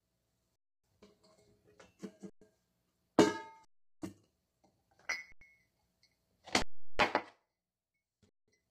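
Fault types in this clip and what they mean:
Low-delay AAC compression: The whole recording sounds rough and grainy, with a hiss-like texture filling the spaces between tonal components and a top band that sounds thin or artificial. The likely cause is a low-delay AAC codec such as AAC-ELD at a low rate, around 24 kbps. Its short frames resolve harmonics poorly. On a spectrogram, harmonic lines look smeared with speckled noise between them, and the upper band looks patchy or uniformly synthetic.
Underrun with held sample: The output buffer runs dry six times: 0.56–0.84 s, 2.30–2.42 s, 3.65–4.02 s, 5.32–5.41 s, 6.62–6.99 s and 8.29–8.48 s. The gaps last from 93 to 372 ms. During each gap the converter holds its last value, so the sound simply stops without a click. It then resumes where it left off, with essentially nothing lost, so the restart is soft. The waveform shows flat horizontal stretches, often offset from zero. 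A spectrogram shows blank vertical bands. The gap lengths fit buffers of 4096 to 16384 samples at 44.1 kHz.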